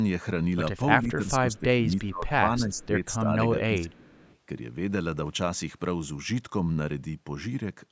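Speech suppressed in double talk hits this speech recording from 1.02 to 2.43 s, 2.59 to 2.96 s, 3.24 to 3.32 s and 3.56 to 4.16 s. The voice dips by up to about 20 dB, likely because an echo canceller, unable to separate it from simultaneous far-end sound, turned everything down. Echo leak appears at 1.55 to 1.59 s, 2.76 to 2.86 s and 4.16 to 4.37 s as faint scraps of the voice returning about 344 ms late and roughly 30 to 35 dB down, likely loudspeaker pickup the canceller failed to remove.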